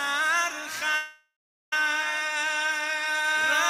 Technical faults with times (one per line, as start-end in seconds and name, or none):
0.95-1.73 call audio freeze